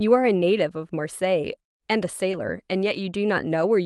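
At 2.31 to 2.35 s there is a short concealed packet loss: about 20 ms of the call arrived too late, and the receiver bridged it by extending the preceding sound before blending back. It is a brief smear rather than a silent gap or sharp click.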